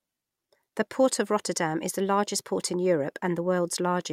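No technical faults can be heard anywhere in the recording. The speech comes through steadily, with no dropouts, clicks or sudden changes in level.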